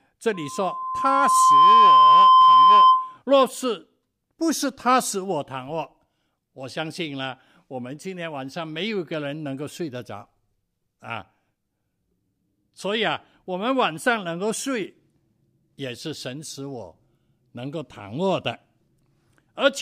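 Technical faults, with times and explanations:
0.34–3.18 s, loudspeaker feedback squeal: the microphone is picking up the loudspeaker it drives, and at 1 kHz the gain around that loop rises above one, so that frequency feeds on itself with each pass. A pure 1 kHz tone emerges over roughly a second and a half and swells into a piercing squeal that sits well above the speech, about 15 dB louder, until the loop is broken shortly after 3 s and the tone stops.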